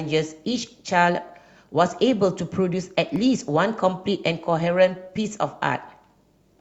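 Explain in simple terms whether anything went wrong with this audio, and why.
At 3.16 s a single sharp snap sits on top of the speech, an electrical switching spike, most likely from a nearby switch or spark, not a digital dropout.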